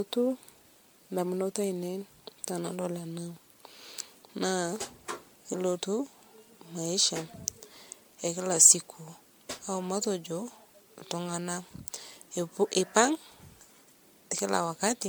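Throughout, repeated lossy encoding, likely around five MP3 passes at what sounds like 96 kbit/s, causes generation loss: the speech turns swirly, hollow and smeared, attacks blurred.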